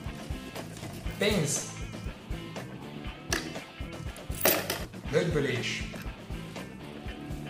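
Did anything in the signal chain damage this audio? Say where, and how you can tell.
Yes. At 1.61 s there is a brief noisy smear lasting about 10 ms, where the sound loses its clarity for an instant. This is a lost LE Audio frame on the Bluetooth link, which fits a single 10 ms LC3 frame. The decoder covered the gap by reusing the previous spectrum with randomised signs.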